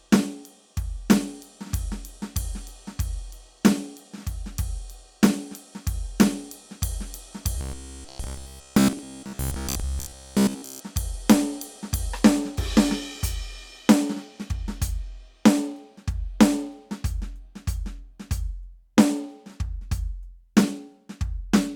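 From 7.58 to 10.82 s the music becomes robotic sound from repeated short buffers: a rigid, metallic buzz at 66.8 Hz, likely from a roughly 15 ms segment replayed while most new audio is skipped. Spectrograms show evenly spaced harmonic lines; waveforms show identical repeating cycles.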